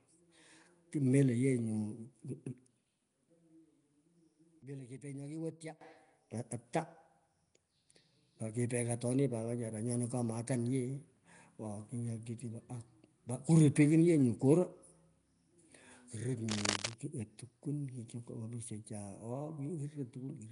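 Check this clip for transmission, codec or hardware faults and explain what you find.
Three faults are audible in this speech recording: codec damage throughout, a short collapse in level near the start, and a burst of scratching near the end.

Nellymoser compression, throughout: The rough, hissy halo and smeared, underwater quality likely come from the Nellymoser Asao codec. At a fixed two bits per sample, starved bands are filled with noise. Nothing sounds above 10.6 kHz, which fits a rate around 44 kbps.

One channel inverted, 4.62 to 5.81 s: The sound drops by about 19 dB. The likely cause is one stereo channel with reversed polarity. When the channels are summed to mono, the centred speech cancels and only the small difference between them remains.

Cable scratch noise, 16.49 to 16.94 s: Dense, uneven scratching rides over the speech at a level only slightly below it. The likely cause is a worn cable or connector being moved, so that its contact resistance fluctuates rapidly and injects bursts of noise.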